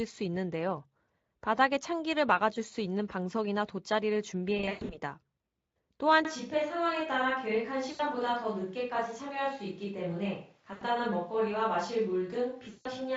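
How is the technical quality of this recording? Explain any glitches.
The recording has two problems: repeated dropouts from lost network packets and a jump to a more distant-sounding microphone partway through. The Speex coding underneath shows little or no damage of its own.

VoIP packet loss concealed by the speech codec happens four times: 4.57 to 4.99 s (about 240 ms lost, scattered over 320 ms, longest gap 120 ms), 7.91 to 8.02 s, 10.73 to 10.84 s (80 ms each), and 12.69 to 12.92 s (160 ms). The decoder keeps extrapolating from the last pitch and filter with falling gain, so each gap smears into a buzzy tone or coloured noise that fades out. Speech can stay weak for a bit afterward.

From 6.25 s to the end, the sound abruptly turns roomy and hollow, with thinner bass. The level drops about 5 dB, and room noise sits roughly 35 dB below the speech. That's most likely a switch to a distant microphone after the close one dropped out.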